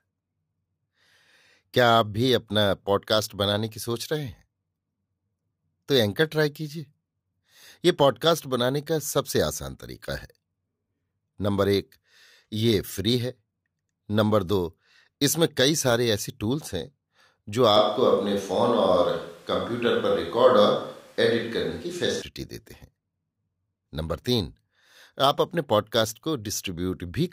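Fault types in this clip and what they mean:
Switch to a distant microphone: From 17.77 s to 22.22 s the speech suddenly turns roomy and hollow. The bass thins out. The level stays about the same as before. Background noise sits about 35 dB below the speech. At 22.22 s the close, full sound snaps back just as abruptly. The likely cause is that the close microphone's feed dropped out, leaving a microphone further away, such as a camera's, to carry the sound.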